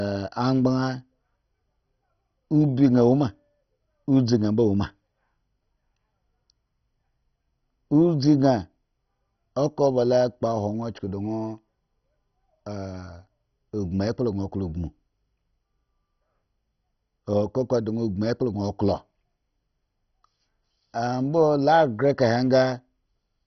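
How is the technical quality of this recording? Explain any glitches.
Pretty rough, honestly. The speech carries one fault, and it runs the whole way through.

For the full clip, it sounds like MP2 compression pushed too hard: nothing above about 6.1 kHz survives, so the speech is dull, with a gurgly, granular grit. That's likely the codec starving for bits, in line with a very low bitrate around 32 kbps. It splits the sound into 32 bands and can't afford the upper ones, so they drop out, and the bands left get quantised coarsely.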